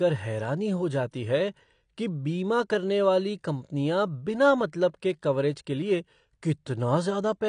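AAC compression damage runs throughout this speech clip. Nothing is present above about 9.9 kHz, so the sound is dull. The sibilants and sustained sounds carry a plainly audible warbling, fizzy texture. The likely cause is low-bitrate AAC-LC coding, consistent with something near 32 kbps. At that rate the encoder lowers its cut-off, quantises the spectrum coarsely and leaves gaps or noise-filled bands, which produces the smearing heard here.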